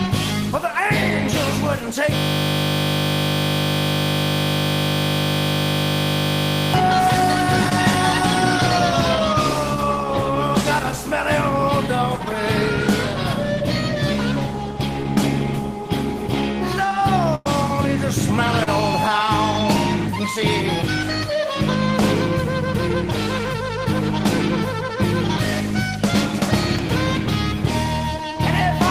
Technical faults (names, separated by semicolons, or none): system hang loop; short concealed packet loss; burst of packet loss